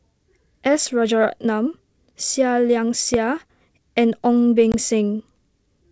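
A speech clip over a wideband telephone link, with two faults. At 3.14 to 3.16 s there is one loud pop, peaking about 15 dB above the speech. It is likely a brief voltage pulse from a plug, switch or static, and the speech carries on underneath. At 4.72 to 4.75 s there is packet loss on the ADPCM call. About 20 ms drops to silence, which suggests a couple of lost packets. The decoder's predictor and step size then briefly mismatch the sender's, so the speech returns slightly distorted. The G.722 coding shows faint or no damage of its own.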